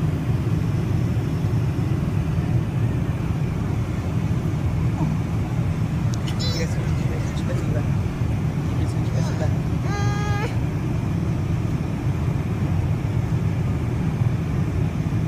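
Overlapping chunks at 2.05–2.10, 5.10–5.15, 8.15–8.20, 11.20–11.25 and 14.25–14.30 s: each 3-second chunk starts 50 ms early, replaying that slice as a regular stutter. On a waveform it appears as a duplicated segment, and on a spectrogram as a thin vertical seam.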